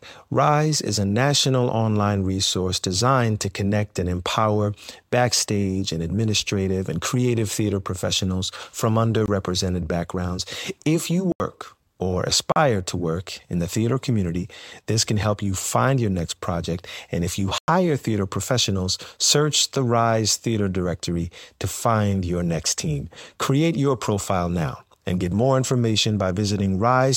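At 9.26 to 9.28 s, right after "creative theater professionals from", then at 11.32 to 11.40 s, at 12.52 to 12.56 s just before "to work in the", and at 17.58 to 17.68 s between "if you" and "theater professionals search the", the speech drops into a block of digital silence. Each time, a run of samples was zeroed, as happens when the output buffer isn't filled in time. The 22 ms gap and the longer ones, up to about 100 ms, sound like short holes. On a waveform each shows as a flat, near-silent line, and on a spectrogram as an empty vertical band edged by thin broadband lines.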